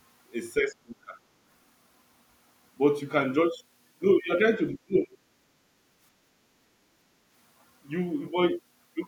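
Twice in this recording of speech, the talker's voice sinks sharply: from 0.58 to 1.15 s it falls by something like 30 dB for about half a second in total, and from 4.83 to 5.17 s it drops by roughly 35 dB across about 0.3 s. This is speech suppressed in double talk, likely because both ends spoke at once and the echo canceller, unable to tell the local voice from the loudspeaker's echo of the far end, attenuated everything it was picking up. Inside that second dip, from 4.94 to 4.99 s, a faint scrap of a different voice surfaces, sitting around 25 dB below the talker. That is the other side's voice leaking through, likely a residue of the far-end playback that the canceller failed to subtract from the microphone signal, so a brief fragment of the remote talker slips into the outgoing audio. Finally, from 6.19 to 6.3 s the room background dips by about 6 dB for roughly 70 ms and then recovers. 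This is background gated by the echo canceller: while the loudspeaker was active, the canceller clamped down on the microphone path, briefly pulling the ambient sound down with it until it released.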